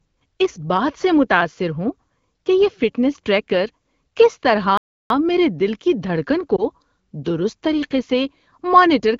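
At 4.77 s the speech cuts out in mid-flow and the output goes completely silent until 5.10 s, a gap of about 0.33 s, before resuming. This is a playback stall, most likely the player running out of buffered data or its output thread being held up. It is not a dropout or packet loss: just a halt of a third of a second followed by a restart of the speech.

Around 6.56 s comes a much shorter fault, a single lost AMR speech frame of 20 ms. The decoder fills the gap by repeating the previous frame's pitch and vocal-tract settings at lower gain, so the speech briefly dips or warbles for a moment and then recovers. No silence opens up, which sets it apart from the stall. The AMR wideband (HD Voice) codec around it runs at 12.65 kbit/s, where speech stays clear with only light codec damage.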